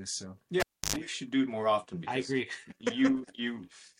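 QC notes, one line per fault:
0.60–0.96 s, cable pulled and plugged in: a pop as the live lead comes out, about 310 ms of near silence, then roughly 100 ms of 50 Hz mains buzz while only the tip makes contact, and a second pop as the sound returns. The waveform shows spikes bracketing a flat gap, and the spectrogram shows a brief 50 Hz harmonic stack.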